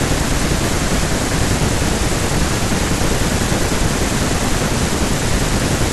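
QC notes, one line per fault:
No faults found in this speech clip on listening.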